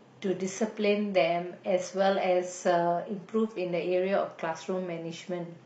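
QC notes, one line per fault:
0.00–4.16 s, adaptive stream starting at a low bitrate: the player opened on a cheap rendition so playback could begin right away, and the top end sounds synthetic and swishy with stronger codec smearing, which fits HE-AAC at around 20 kbit/s rebuilding treble from a thin core. At 4.16 s it switches up to something like AAC-LC at 96 kbit/s once the connection was sized up, so the detail snaps back in with no gap.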